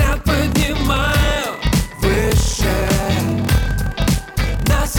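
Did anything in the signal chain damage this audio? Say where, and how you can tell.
Yes. A block size mismatch (padded) at the buffer stage, throughout: zero-filled gaps buzz at 38.3 Hz, fitting 1024-sample writes, and playback runs at 0.889× speed without the pitch drop of a rate mismatch.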